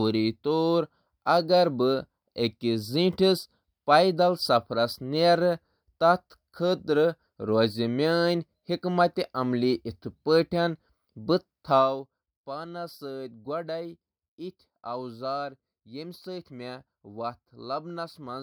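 From 11.71 to 12.07 s the speech drops by roughly 10 dB with zipper noise: the gain moves in unsmoothed steps, around a hundred a second, each leaving a small click, so a fine ticking rides on the voice during the fade.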